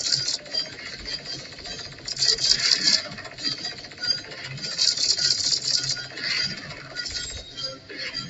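Throughout the clip, a noise suppressor meant for speech is applied to the sound. It mistakes steady tones and ambience for noise, so sustains and tails are pushed down while attacks pass through. The level swings by around 10 dB and the sound pumps and thins. On a waveform, the envelope breathes unevenly after each onset.

The noise suppressor also cuts specific stretches of sound. From 0.38 to 1.66 s the level drops by about 7 dB, from 1.82 to 2.07 s by about 6 dB, from 3.75 to 4.01 s by about 7 dB, and from 6.74 to 6.95 s by about 5 dB. In each stretch, held material sags and decays end early. On a spectrogram these show as darker patches with truncated tails beneath an 8 kHz ceiling.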